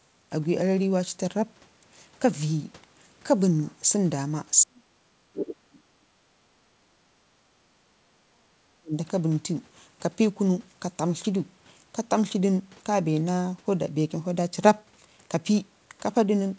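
From 4.59 to 7.3 s and again from 7.77 to 8.94 s, the speech sinks and breaks into pieces, at its deepest nearly vanishing. This is speech suppressed in double talk, likely an echo canceller mistaking overlapping talk for loudspeaker echo and muting both.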